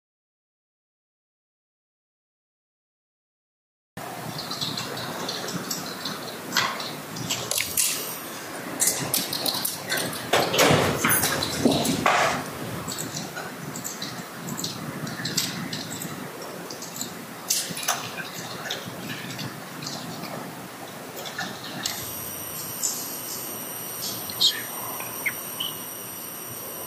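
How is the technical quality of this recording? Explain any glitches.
There's one glitch, right at the top. From the start to 3.97 s there's an audio dropout to silence: dead silence with no room tone, most likely the input dropping out while recording carried on.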